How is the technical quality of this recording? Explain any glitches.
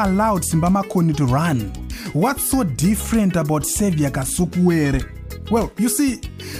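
No technical glitches are audible anywhere in it.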